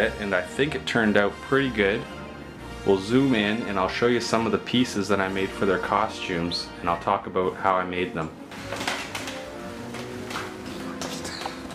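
No technical faults can be heard anywhere in this recording. There is nothing to place on the timeline or describe.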